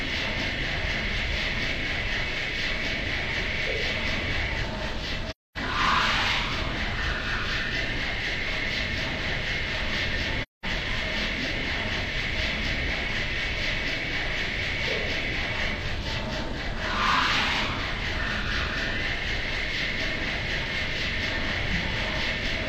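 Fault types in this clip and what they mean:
AAC frame loss with muting: coded frames went missing and the decoder zeroed them, so the overlapping windows fade the sound out and back in. You get soft gaps at 5.30 s, about 0.26 s long, and 10.42 s, about 0.21 s long.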